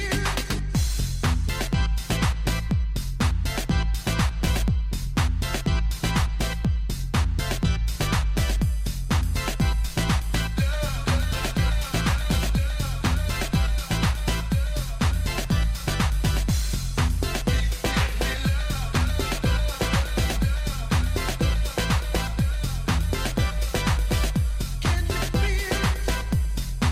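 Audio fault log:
No faults found anywhere in the audio; nothing to log.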